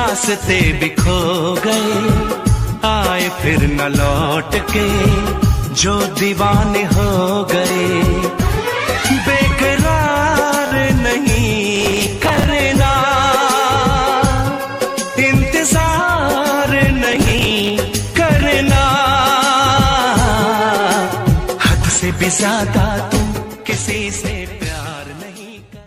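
The audio has two kinds of fault, both from audio arriving late at the output.

Repeated buffer occurs at 7.67 to 7.70 s and 10.67 to 10.72 s. Each time, the device ran out of fresh audio and replayed its last block. That block is about 11.6 ms long, which fits a 512-sample buffer. The first event plays the same slice three times, and the second five times, so each is heard as a brief stutter. Roughly 20 ms and 50 ms of real sound are lost. On a waveform, identical short segments repeat side by side with abrupt joins. On a spectrogram, each join shows as a thin vertical line.

Processor overload crackle runs from 11.76 to 12.44 s and again from 17.13 to 17.70 s. Here the processor repeatedly failed to finish very small buffers of around 5 ms in time. Dozens of deadlines were missed in a row, and each miss filled in with stale audio. The result is a gritty tearing crackle over the sound that stops once the load eases. 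A waveform shows dense jagged discontinuities through each span. A spectrogram shows a cluster of broadband vertical streaks.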